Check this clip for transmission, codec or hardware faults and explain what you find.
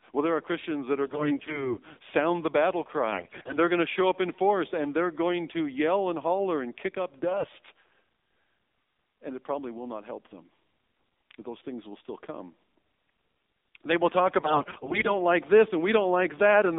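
Two faults are present: narrowband mobile coding throughout and four bursts of corrupted frames.

AMR narrowband mobile codec, throughout: the voice is squeezed into roughly 200 Hz to 3.7 kHz and rebuilt from a coarse vocal-tract model, sounding buzzy and synthetic, which fits the 7.4 kbps mode.

AMR bit errors at 1.05–1.77 s, 3.12–3.59 s, 7.30–7.51 s and 14.40–15.10 s: a sizeable share of weakly protected bits arrived flipped, misplacing excitation pulses, so the speech turns hoarse, scratchy and gargly while keeping its pitch. The 3.12 s burst is the worst.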